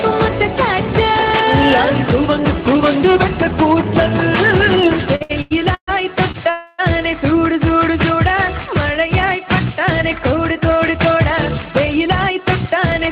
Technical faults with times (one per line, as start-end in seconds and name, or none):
5.15-5.89 repeated stalls (stutter)
6.31-6.36 short stall from a late packet
6.50-6.80 call audio freeze
11.92-13.08 jitter buffer speed-up